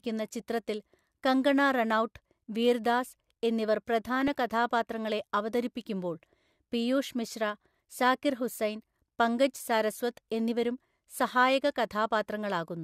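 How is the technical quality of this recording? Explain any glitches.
One glitch stands out in the speech. From 4.05 to 4.28 s, DAB burbling: bit errors corrupt sub-band samples and scale factors, giving short noise blips and level jumps in single sub-bands, seen spectrally as flickering isolated bands.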